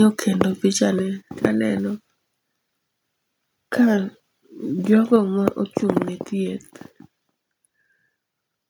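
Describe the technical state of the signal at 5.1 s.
Microphone overload from 5.13 to 5.16 s: the loudest peaks of the speech run flat against the converter's limit, with a small fraction of samples sheared off at the top. This is likely an input volume set too high for the converter, and it adds a brief harsh crackle.

Microphone volume stepped down at 5.16 s: immediately after that distorted peak, voice and background together drop by about 3 dB in a single step. The likely cause is the call software reacting to the overload by lowering the device's input volume at once.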